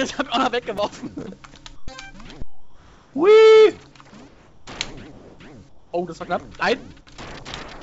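At 0.78 s a repeated buffer: one block, which fits a 128-sample buffer of about 2.7 ms, plays three extra times with a hard join at each repeat, so it registers as a click or brief buzz, with roughly 7 ms of audio lost.

Comfort noise in place of the background follows in five quiet stretches: 1.76–1.88 s, 2.42–3.14 s, 4.28–4.67 s, 5.12–5.39 s and 5.69–5.93 s. The background, about 33 to 41 dB below the loud passages, becomes a smoother synthetic noise, likely from discontinuous transmission. It is about 1, 4, 3 and 6 dB quieter in four pauses and about 2 dB louder at 5.12 s. Throughout, the call codec leaves nothing above 8 kHz.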